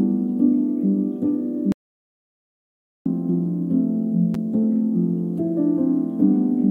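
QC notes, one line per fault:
1.72–3.06 s, audio dropout to silence: the sound cuts out into silence with no room tone for about 1.34 s. The input was likely lost while recording continued writing silence.
4.34 s, gap between stream segments: a hard-edged hole of about 7 ms, consistent with mismatched timestamps at a 4-second segment boundary that the player filled with silence; no audio is missing.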